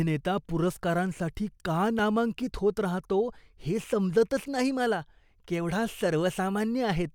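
A block of digital silence falls at 1.99 s in this speech: for about 2 ms the sound drops out and then resumes, with no fade either way. Cutting abruptly out and back in leaves a tick or dip rather than an audible gap.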